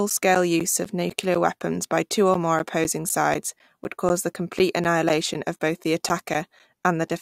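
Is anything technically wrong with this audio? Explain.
Yes. From 0.10 s to 7.10 s there are periodic USB or driver dropouts: every 0.25 s the audio path is briefly blocked, and roughly 10 ms of speech is replaced by silence, about thirty times. This gives regular ticks heard only while speech sounds. Their strict timing sets them apart from random clicks or network glitches.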